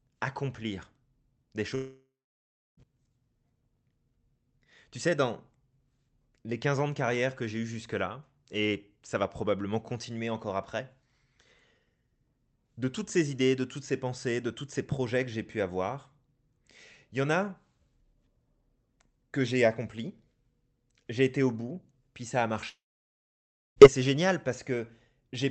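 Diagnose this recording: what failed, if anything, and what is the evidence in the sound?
At 1.75 to 2.80 s and again at 22.69 to 23.79 s the speech cuts out and the last sound smears into a short fading buzz, then drops to silence, about 0.67 s of it in the first gap and 0.98 s in the second, before speech resumes with roughly a second of material simply gone. That points to a long network dropout as the likely cause: the receiver's concealment extended the final audio until it gave up. The call path's 8 kHz audio bandwidth can still be heard around the gaps.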